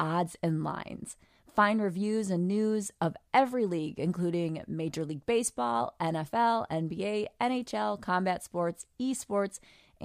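No technical faults can be heard in the speech. Nothing audibly goes wrong at any point in the recording.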